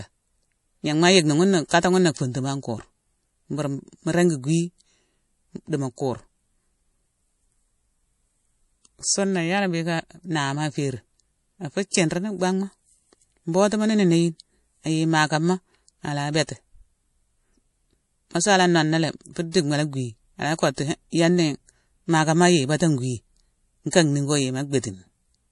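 Throughout the speech, the treble stops dead at 11.4 kHz and faint detail flickers with a watery, swirling quality. This is plainly audible MP3 compression, likely at a low rate around 48 kbps. A spectrogram shows a flat ceiling and patchy, blinking high-frequency blocks.

Pre-echo follows from 1.69 to 1.71 s, just after "ma yickni" and before "na funtuma an". It recurs from 19.52 to 19.54 s after "nonalé fu", and again at 23.91 s. Each time, a short hiss of about 20 to 27 ms runs ahead of a sharp onset, because the codec's noise has leaked backward across its block. On a waveform this appears as a thin fuzz before the attack.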